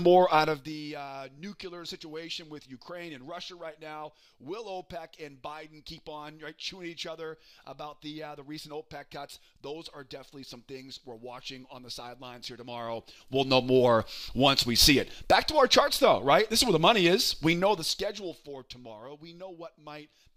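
Zipper noise occurs at 0.44–0.76 s, 12.6–13.6 s and 17.48–18.68 s, while the level falls, rises, then falls by around 20 dB in unsmoothed 2 dB, 1 dB and 1 dB steps, about thirty per second. Unlike random clicks, this regular ticking appears only while the level moves.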